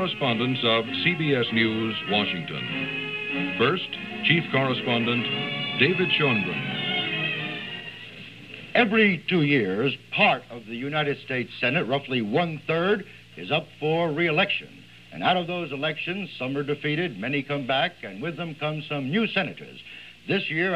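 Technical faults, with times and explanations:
No technical faults detected.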